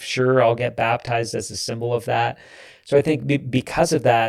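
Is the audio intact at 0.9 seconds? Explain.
No. At 0.9 seconds the speech has channel delay (comb filtering), and this fault runs through the whole clip. One channel arrives roughly 20 ms after the other. When the two are summed to mono, the parts they share cancel at evenly spaced frequencies. The first notch sits at around 20 Hz, and more follow at regular steps up the spectrum. The result sounds rough or slightly doubled.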